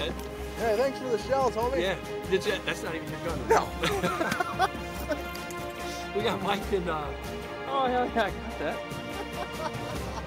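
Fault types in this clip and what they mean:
Nothing stood out on listening; no fault of any kind could be heard anywhere in the audio.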